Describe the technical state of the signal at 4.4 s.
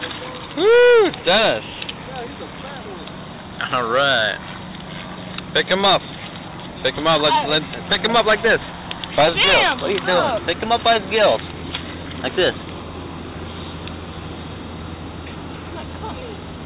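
At 4.4 s the signal is intact, with no dropout, glitch or distortion, only the narrow band of the call path, which carries nothing above 4 kHz.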